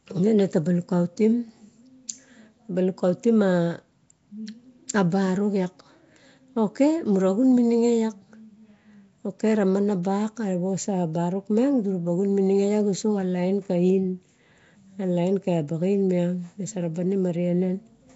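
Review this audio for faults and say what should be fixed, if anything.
Nellymoser compression damage runs through the whole recording, from start to finish. The speech carries a rough, hissy halo and a smeared, underwater blur, and nothing is present above about 7.7 kHz. This is likely the Nellymoser Asao codec used by Flash: it codes short fixed blocks with very few bits per sample, leaving quieter bands empty and filling them with noise, at a rate that fits roughly 32 kbps. To prevent it, capture and store the speech with an uncompressed or modern high-bitrate codec instead of the Flash microphone path.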